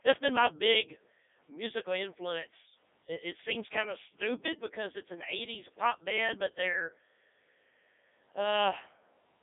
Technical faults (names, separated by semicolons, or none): Codec 2 vocoder